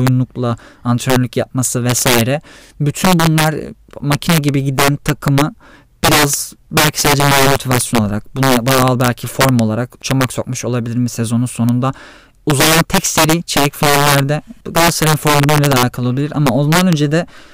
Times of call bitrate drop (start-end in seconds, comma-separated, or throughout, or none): none